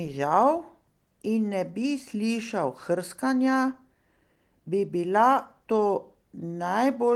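Carried through Opus voice compression at 20 kbps in its full-band hybrid mode, the speech recording shows no technical fault worth pointing to.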